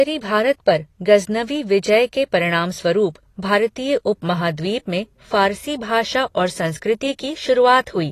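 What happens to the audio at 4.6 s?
At 4.6 s the speech carries the same coding damage heard across the whole clip: a dull, smeared tone with a warbling, fizzy texture on sustained vowels and sibilants. This is most likely AAC compression, which fits AAC-LC at a low bitrate around 32 kbps quantising its frequency lines so coarsely that detail is discarded. On a spectrogram there is a hard ceiling with nothing above 14 kHz, and patchy holes and blotchy filled bands below it.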